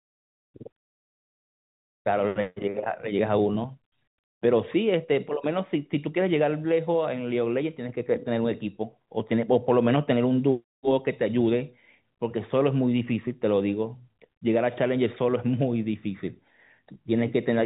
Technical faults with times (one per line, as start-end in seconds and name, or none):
16.94-16.96 packet loss with pitch repetition